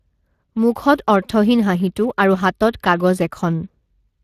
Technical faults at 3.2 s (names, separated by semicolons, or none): Speex codec